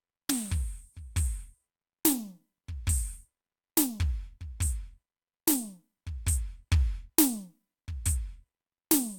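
No technical faults can be heard anywhere in the music; the signal stays continuous and stable throughout.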